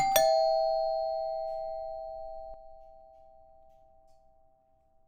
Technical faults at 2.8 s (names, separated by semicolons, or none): sudden gain jump